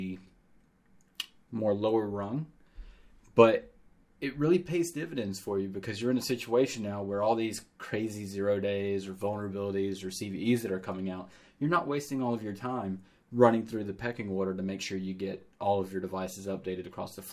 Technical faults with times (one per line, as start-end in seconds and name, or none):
none